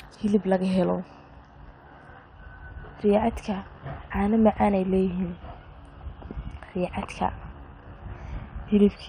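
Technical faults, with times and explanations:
Throughout, MP2 compression: the speech was likely squeezed through an MPEG Layer II encoder at a low bitrate, which fits a rate of around 80 kbps. Too few bits to share among its 32 sub-bands, so the highest bands are dropped and the rest quantised coarsely. Bands switching in and out from frame to frame give the plainly audible dull, muffled top end and the gurgling, grainy roughness that clings to the speech.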